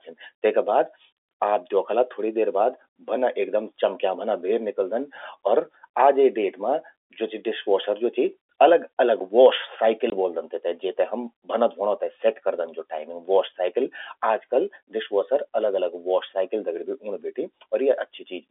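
At 10.1 to 10.12 s the speech drops out completely for 20 ms, just before "ब्वोलदन तेते जेते हम". This is packet loss filled with silence. A gap of this length fits a single lost packet on the 20 ms framing common to G.711 telephone coding, and the receiver substituted silence in its place. The signal is cut off abruptly and resumes abruptly, so the hole has hard edges. The gap sits within the narrow 300 Hz to 3.5 kHz line band.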